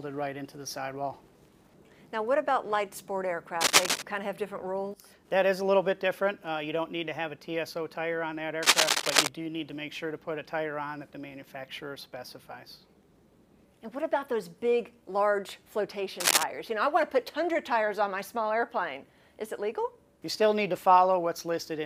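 A worn cable or connector was likely being moved, its contact resistance jumping erratically, producing cable scratch noise: harsh rustling bursts, somewhat louder than the sound itself, at 3.61–4.02 s, 8.63–9.28 s and 16.20–16.44 s.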